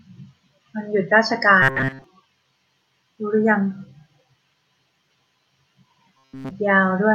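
From 1.62 to 2.04 s and again from 6.16 to 6.51 s, the speech takes on robotic sound from repeated short buffers, a rigid metallic buzz near 133 Hz. The likely cause is starved playback looping the last 7.5 ms segment, mostly in the first stretch and throughout the second.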